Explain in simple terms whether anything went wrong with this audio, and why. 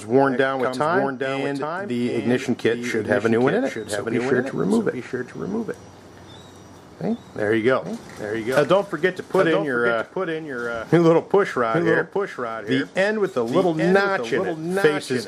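Throughout the clip, every sound repeats a bit more quietly about 0.7 seconds later, a doubled audio track, likely from the same audio being recorded twice along a slower path.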